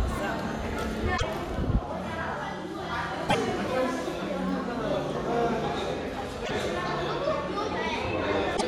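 At 1.14 to 1.23 s, 3.25 to 3.35 s, 6.42 to 6.51 s and 8.53 to 8.63 s there's damaged data in the compressed stream. The decoder misreads corrupted frames, loses sync and hunts for the next header, so each spot gives a roughly 0.1 s glitch.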